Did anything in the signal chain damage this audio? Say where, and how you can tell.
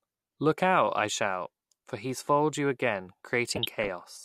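Yes. The damage is DAB burbling, from the codec and reception stage. From 3.50 to 3.88 s, right after "he's foiled you again", the speech breaks into burbling noise. Bit errors from weak DAB reception got past the error correction into the MP2 audio data. Corrupted samples put short blips of noise in single sub-bands. The length points to 18 damaged frames, with an error rate of roughly 0.3 percent.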